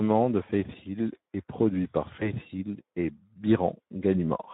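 Throughout the speech, the Speex codec leaves plainly audible damage. With so few bits for the excitation, the voice sounds hoarse and grainy. This fits a Speex mode near 11 kbps. Unlike the watery, swirling artefacts of a transform codec, this roughness tracks the voice itself, because the excitation is coarsely modelled. It is not a tonal sweep across the spectrum.

From 2.20 s to 2.31 s, right after "est produit par", there is VoIP packet loss concealed by the speech codec. The sound smears into a brief buzzy tone or coloured noise that fades. This fits one lost 20 ms frame, which the decoder filled by extrapolating its last pitch and filter at falling gain. The weak, distorted stretch lasts about 120 ms, well beyond the gap itself, because each following frame rebuilds on the guessed state. A plain dropout would be a clean silence or click instead.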